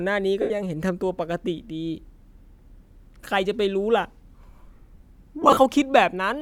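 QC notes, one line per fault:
0.42–0.51 s and 5.42–5.57 s, lost LE Audio frames: the LC3 decoder conceals gaps by reusing the last spectrum with random signs, smearing tones into noise. The first covers 82.5 ms. The second, 90 ms, is scattered across 150 ms, longest run about 40 ms.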